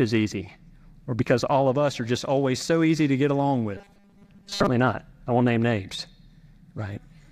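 Right after "easy to get along", from about 3.77 s to 4.69 s, the speech turns into a stiff, metallic buzz pinned at 200 Hz that only loosely tracks the words, until it clears before "not I won't name". That's robotic sound from repeated short buffers, likely: audio arriving too seldom, with the last 5 ms chunk looped to fill the gap. Most of that stretch is repeats rather than real audio.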